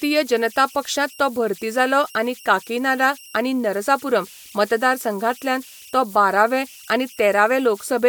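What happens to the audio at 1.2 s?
At 1.2 s the speech carries converter idle tones, present across the whole clip. An undithered delta-sigma converter settles into repeating bit patterns on small inputs, producing a whistle around 3 kHz and grainy noise about 25 dB below the signal.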